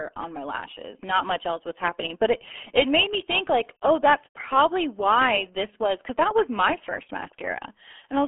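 RealAudio 14.4 codec damage runs through the whole clip. The speech is squeezed into a band of roughly 250 Hz to 3.4 kHz, with nothing above 3.8 kHz, and heavy low-bitrate coding, consistent with about 8 kbit/s, leaves it muffled and gargly throughout.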